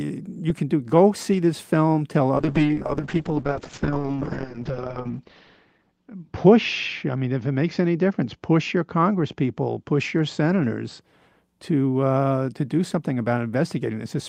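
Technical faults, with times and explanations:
2.36–11.07 s, call bitrate drop: after "see this film tell" the sound turns rough and watery, and its bandwidth shrinks from 20 kHz to 8 kHz, worst for about 2.5 s. This fits an encoder cut from around 32 to 6 kbps, recovering by "to uh to do".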